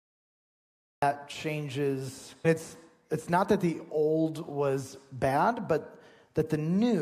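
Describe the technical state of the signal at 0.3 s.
At 0.3 s the signal is pure digital silence, part of a cut-off start running from 0 to 1.02 s. Capture began late, so the sound enters abruptly at 1.02 s mid-event with no attack or fade-in. Unlike a dropout, nothing precedes the gap.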